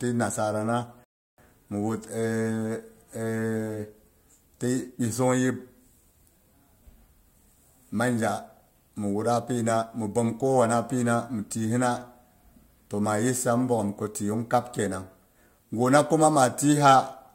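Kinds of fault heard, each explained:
Rebuffering stall: the player used up its downloaded audio before the next portion arrived, so playback halted until enough data came in to continue. In this speech clip the sound drops to silence at 1.04 s and picks up again at 1.38 s exactly where it left off, with nothing skipped or repeated. The only effect is a pause of about 0.34 s added to the timeline, breaking the flow of the speech.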